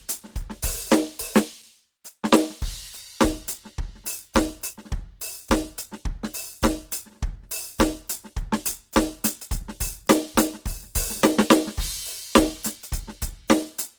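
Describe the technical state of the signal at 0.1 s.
At 0.1 s the music carries Opus compression, present across the whole clip rather than just this moment. The likely cause is an encoder in its CELT music mode starved of bits, which fits a rate around 16 kbps. It preserves each band's energy but fills the gaps by folding lower bands or substituting noise. Bandwidth stays fullband, yet the damage is plainly audible: tones sound grainy, rough and noisy rather than clean.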